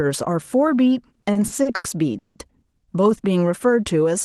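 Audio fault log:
1.09–2.37 s, repeated stalls (stutter): the speech halts eight times in this span, with about 400 ms of filler in total and the longest hold near 170 ms, so roughly a third of the stretch is stretched-out sound. Packets reached the call's jitter buffer late or too slowly, it kept running dry, and the receiver extended the last sound and faded it on longer waits. Nothing is lost, but the delivery drags and stutters.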